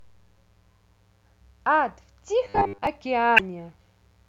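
A mains buzz runs under the speech from start to finish, roughly 40 dB below it. Switching spikes on a 60 Hz supply leak in, stacking harmonics into a raspy, steady edge. Unlike a smooth hum, it has bright upper content and never changes.

From 2.45 to 2.87 s the speech turns into robotic sound from repeated short buffers: a rigid, metallic 100 Hz buzz that still loosely tracks the speech. The likely cause is audio arriving too seldom, with the last fragment replayed every 10 ms, consistent with a 10 ms buffer. Most of the real audio in that span is skipped. Its 100 Hz rate sets it apart from the 60 Hz mains buzz.

Between 3.36 and 3.40 s, damaged data in a compressed stream produces a brief glitch. The decoder misreads corrupted frames, loses sync and skips ahead to the next valid frame. This isolated glitch differs from the sustained, pitched repetition heard earlier.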